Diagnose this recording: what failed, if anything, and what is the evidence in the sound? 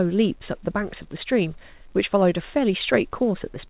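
Nothing failed in this recording: the speech comes through a WebRTC call path whose band stops at 4 kHz, which fits narrowband G.711 A-law coding at 64 kbps, with no dropouts, glitches or other breaks in the signal.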